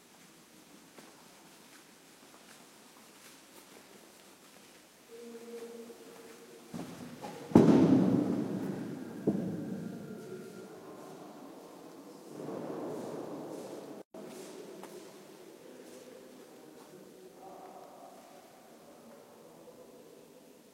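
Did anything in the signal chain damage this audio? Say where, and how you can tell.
Yes, at the codec stage: there is a gap at a join of encoded pieces from 14.02 to 14.14 s. The sound drops to silence for about 126 ms and then resumes exactly where it left off, with nothing lost. On a waveform this is a flat, near-zero stretch with steep edges, slightly softened. A spectrogram shows a clean vertical blank band across all frequencies. Two separately encoded segments were concatenated untrimmed, so the encoder's start delay and final-frame padding both remain as silence.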